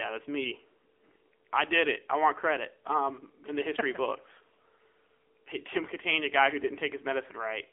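Throughout, the speech sounds thin, buzzy and synthetic, with nothing above 3.6 kHz and a 300 Hz to 3.4 kHz telephone band. This is AMR narrowband mobile codec damage: a vocal-tract model rebuilt from sparse pulses, at a low mode that fits about 8 kbps.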